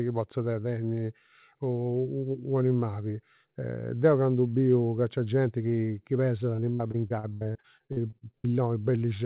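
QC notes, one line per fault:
6.56–8.47 s, repeated packet loss (robotic sound): 19 holes, longest 77 ms, each filled by stretching the last sound. About 29% of that stretch is patched, so it comes out choppy and robotic.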